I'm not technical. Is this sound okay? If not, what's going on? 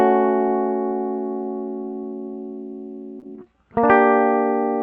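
No. At about 3.19 to 3.24 s there is a short concealed packet loss. Roughly 20 ms of the music never arrived in time over the call connection, so the receiver invented about 23 ms to cover the gap by stretching out the sound just before it, then blended back into the real audio. You hear it as a tiny smear or wobble. The call path also trims the highest treble above about 8 kHz.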